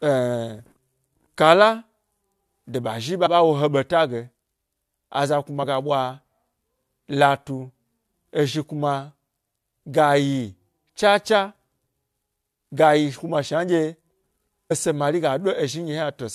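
Compressed frames skipped: in this speech clip the decoder drops whole frames and jumps ahead by about 20 ms at 0.58 s and 5.60 to 5.64 s, and about 50 ms at 3.25 to 3.27 s and 14.70 s, just before "ese mari".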